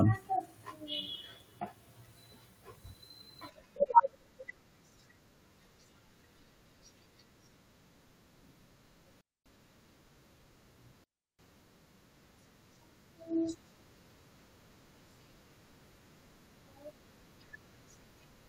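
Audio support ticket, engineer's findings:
Digital wireless dropout, two events: speech muted 9.21–9.46 s (0.25 s) and 11.04–11.39 s (0.35 s). Receiver lost too much of the RF data stream and muted with a very fast fade. Clean near-silent holes, no hiss, crackle or squelch burst at either edge, which rules out an analogue wireless dropout. No smeared or repeated fill, so not concealment from a codec. Check antenna placement and RF path.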